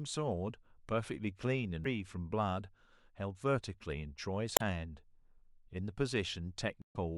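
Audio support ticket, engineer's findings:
Three glitches in the speech: 1.82–1.86 s, 4.54–4.61 s, 6.79–6.96 s, the last longest at about 170 ms. Cause: damaged data in a compressed stream, with corrupted bytes in the encoded file or transport. The decoder misparses or drops the affected frames, loses sync and hunts for the next valid frame header, emitting garbage until it relocks. Check the storage/transfer path and stream integrity.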